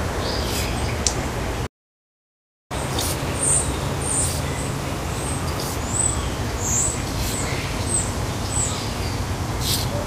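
A recording of everyday sounds with two linked faults. At 1.66 s a playback stall cuts the audio to silence for about 1.04 s, until 2.72 s, most likely because the player ran short of buffered data or its output thread was briefly blocked. What marks it as a stall, not a gap in the recording itself, is that the silence is followed at once by a change in speed. From 2.72 s to 5.72 s comes catch-up at higher speed: the player resamples its backlog to run at 1.15 times normal speed, so everything sounds hurried and sits about two semitones sharp for those three seconds. Unlike a plain pitch shift, timing and pitch rise together, and the effect is temporary, tied directly to recovering the time lost in the stall.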